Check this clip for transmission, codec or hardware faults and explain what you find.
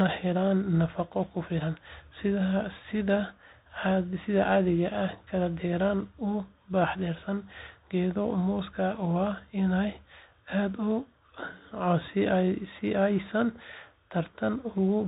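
The whole clip has gone through a Bluetooth CVSD headset codec, and the damage is plainly audible from start to finish. It's narrowband, so nothing above 4 kHz survives and the speech sounds boxed in. CVSD sends one bit per sample saying up or down, with an adapting step, which fits a 64 kbps link. Loud high sounds outrun that step and distort, s sounds come out scratchy, and there's a grainy hiss sitting under everything.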